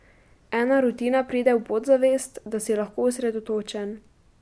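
A short bit of recorded speech, and honestly there's nothing technically wrong to point at here, no faults turn up anywhere in it.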